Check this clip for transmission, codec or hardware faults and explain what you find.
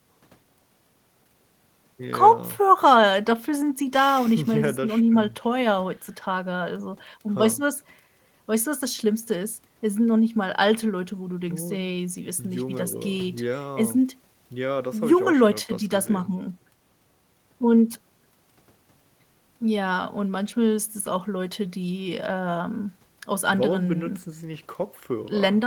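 Nothing stood out on listening to the recording.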